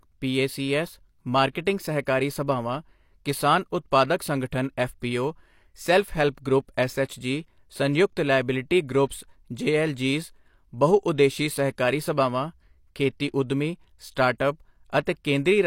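A short burst of hiss creeps in just ahead of sharp onsets at 2.05 s, right before "ਸਭਾਵਾਂ ਕਿਸਾਨ", then again at 14.38 s and 15.06 s, and each attack lands blurred rather than crisp. This is pre-echo. The transform codec spreads quantisation noise across its whole block, so noise sized for the loud onset also fills the near-silent moment before it, smearing ahead of the attack by roughly 16 ms, 18 ms and 13 ms respectively.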